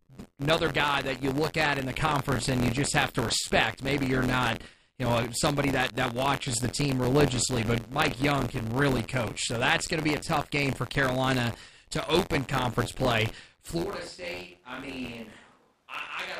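A steady robotic buzz at about 86 Hz rides under the speech from start to finish and falls away in pauses. This is buffer tearing: writer and reader of a ring buffer have slipped, so roughly a tenth of each 512-sample period replays audio some 40 ms old, with hard joins either side.

From 13.85 s, right after "to open conference play", the voice turns suddenly roomy and hollow, thinner in the bass, about 10 dB quieter, with background noise around 35 dB below the speech, and stays so to the end. The cause is likely a switch to a distant microphone after the close one dropped out.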